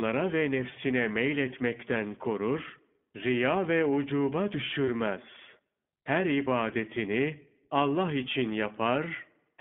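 iLBC codec, throughout: the whole recording passes through this narrowband VoIP codec, so the speech sits in a band of roughly 150 Hz to 3.5 kHz, with nothing above that. Each 20 ms frame is coded without reference to the one before, which fits the 15.2 kbps mode. The coding damage is plainly audible as a slightly rough, synthetic edge on the speech, typical of this kind of excitation coding.

Lost iLBC frames, 4.86 to 4.89 s: a short dropout, consistent with a single lost 20 ms frame, is filled by the decoder repeating the last pitch cycle blended with noise. It sounds like a brief held, faintly buzzy vowel replacing the missing sound. Because iLBC frames are self-contained, the speech returns to normal right after the gap, with no lingering smear.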